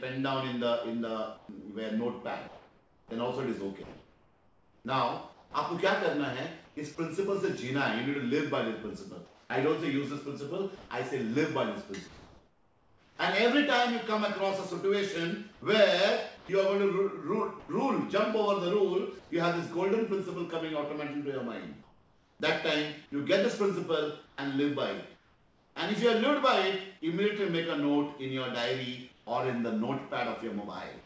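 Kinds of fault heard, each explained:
Sound chopped by the voice detector: around 1.4 to 7.0 s and 15.5 to 17.7 s the sound turns choppy, with edges swapped for flat fill, likely from the sender's detector toggling.
Comfort noise in place of the background: in several pauses the real background gives way to a steady, featureless hiss, about 2 to 4 dB quieter, likely from discontinuous transmission.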